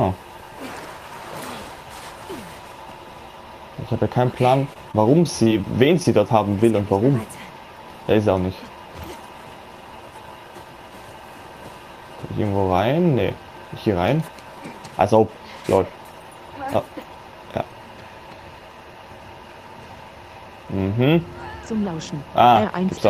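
Short concealed packet loss hits the audio four times, at 4.73, 4.91, 5.43 and 5.62 s, each a 20 ms gap the receiver patched by extending the preceding sound before blending back, leaving brief smears or wobbles in quick succession.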